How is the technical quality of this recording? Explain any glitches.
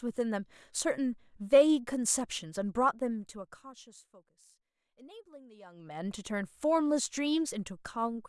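No glitches or technical faults can be heard here.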